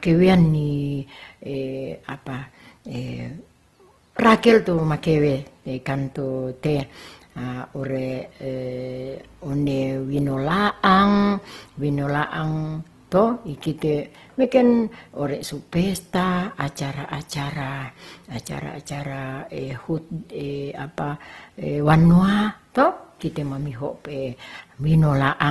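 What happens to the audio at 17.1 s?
At 17.1 s the speech carries the same damage heard across the whole clip: Opus compression is the likely cause. Nothing reaches above about 12.2 kHz, and the sound is rough and grainy, which fits a low bitrate near 16 kbps in Opus's music mode. The encoder preserves each band's energy but fills starved bands with folded copies or noise. That is why there is less of the watery, swirling MP3-style warble and more of a coarse, noisy texture.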